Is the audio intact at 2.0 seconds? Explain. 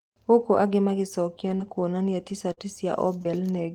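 No. Between 1.47 and 3.27 s, scattered short gaps occur: around four packets arrived late or not at all, and the receiver bridged each hole, the longest about 40 ms, by extending the preceding sound. The speech picks up brief ticks, smears and hiccups.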